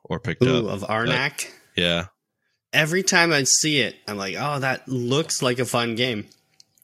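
Speech, with compressed frames skipped at 6.04 s. About one frame of audio is simply missing, so the sound jumps ahead by around 20 ms.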